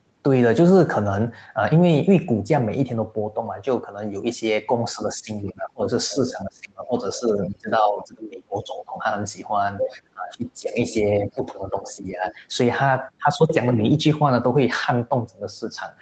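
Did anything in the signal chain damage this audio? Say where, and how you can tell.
Yes, in the call processing stage. Speech is suppressed in double talk from 4.95 to 8.95 s and again from 9.87 to 12.42 s, totalling roughly three seconds and one and a half seconds of affected sound. The talker ducks by up to about 20 dB, while the far side is playing on the loudspeaker. That points to an echo canceller that likely could not separate the near talker from loudspeaker echo, so it turned everything down. Packet loss would instead leave abrupt gaps unrelated to the other side.

The other side's voice is leaking through at 5.47–5.52, 6.09–6.3, 7.15–7.49, 9.8–9.97, 10.72–10.94 and 11.86–12.35 s. These are scraps, mostly about 15 to 25 dB below the talker, rising to only about 5 dB below at 9.8 s. This is residual echo, likely from the far end playing on a loudspeaker and reaching the microphone. 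Analogue crosstalk would be steady and continuous. These fragments come and go with the other side's speech and cluster inside the suppressed stretches.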